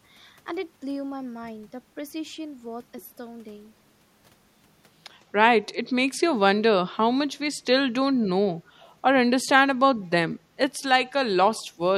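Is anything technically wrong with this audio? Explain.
Yes, two kinds of fault appear near the end of the speech.

Echo leak, 8.8 to 8.87 s: a faint copy of speech returns about 211 ms late, about 35 dB below the main level. The likely cause is a far-end loudspeaker pickup that the echo canceller failed to remove fully.

Speech suppressed in double talk, 11.07 to 11.12 s and 11.73 to 11.77 s: the speech briefly dips, by roughly 10 dB and then roughly 5 dB, for a few tens of milliseconds each. This likely happened because an echo canceller confused overlapping talk with echo and attenuated both.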